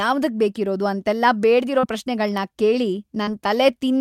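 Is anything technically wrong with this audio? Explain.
Yes. Short concealed packet loss at 1.79–1.86 s and 3.23–3.30 s: about 40 ms of speech arrived too late each time, and the receiver extrapolated over the gap, leaving a brief smear.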